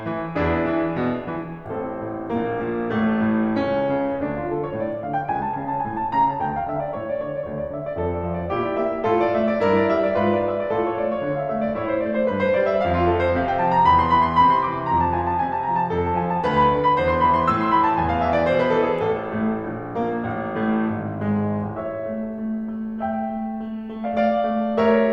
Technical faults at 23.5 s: none

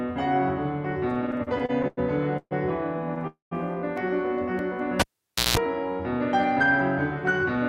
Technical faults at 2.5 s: call audio freeze

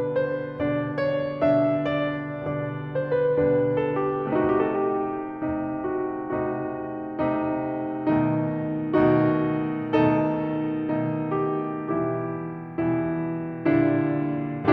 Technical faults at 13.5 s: none

